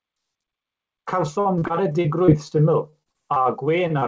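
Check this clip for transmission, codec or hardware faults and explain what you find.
The speech shows packet-level transmission faults from 1.4 s onward. Its high frequencies stop at 8 kHz, which fits a G.722 call codec at 64 kbps working normally.

Repeated packet loss (robotic sound) occurs from 1.40 to 2.54 s with eight gaps, the longest 49 ms, and again from 2.90 to 3.48 s with five gaps. The receiver keeps patching holes by extending prior sound, giving choppy, robotic speech. Unlike single losses, the holes cluster tightly together.

A short stall from a late packet occurs at 3.87 to 3.93 s. The jitter buffer emptied, so the last sound was held for 25 ms and then resumed. Nothing is lost, only a brief drawn-out buzz.

A short concealed packet loss occurs at 3.99 to 4.05 s. About 30 ms never arrived and was filled by continuing the previous sound. Unlike the stall, audio is actually missing, heard as a brief smear.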